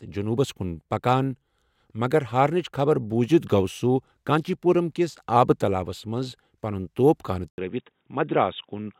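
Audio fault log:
7.5 s to end, input switched to a poorer device: after an 80 ms gap the speech turns dull and boxy, with nothing above 3.8 kHz, a faint new noise floor and no obvious level jump, likely from recording moving to a narrower-band microphone or headset profile.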